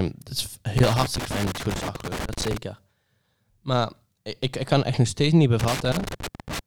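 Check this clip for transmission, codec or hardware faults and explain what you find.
Two bursts of loose connector crackle, from 0.78 to 2.57 s and from 5.59 to 6.59 s: a worn contact repeatedly breaking chops the speech into irregular scratching crackle, seen as jagged waveform spikes and broadband vertical streaks on a spectrogram.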